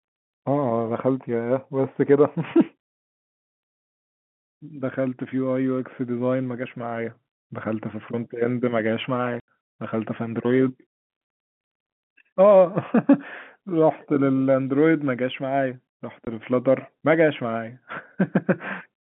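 A speech recording carried over a telephone line, the band sitting between about 150 Hz and 3.5 kHz as G.711 coding delivers it, is broken twice by abrupt dropouts: an 80 ms hole from 9.40 to 9.48 s and a 20 ms hole at 16.25 s, each with hard edges. This is packet loss filled with silence. Lost packets were replaced by dead air, and the gap lengths fit 10 ms packets, eight and two of them.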